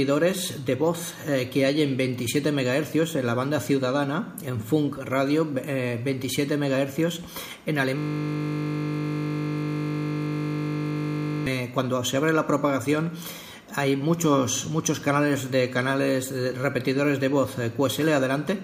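From 7.98 s to 11.46 s the audio freezes into a system hang loop: the playback side stalled while the hardware kept replaying the same ring buffer. A 20 ms slice repeats exactly, well over a hundred times, giving a steady buzz at 50 Hz. On a waveform the segment is one identical short cycle tiled end to end. A spectrogram shows flat horizontal lines at 50 Hz and its harmonics, with no change over time.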